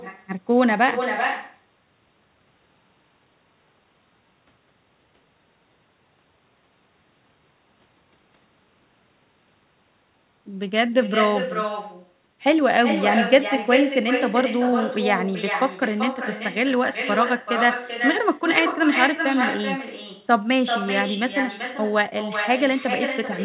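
From start to finish the speech carries an echo with no canceller. The far end is playing the call out of a loudspeaker, its microphone hears that, and nothing subtracts it, so every phrase comes back roughly 400 ms later, only about 6 dB down: a thinner, quieter double. The echo is fairly loud. Nothing reaches above 4 kHz, which fits a G.711 mu-law call path at 64 kbps.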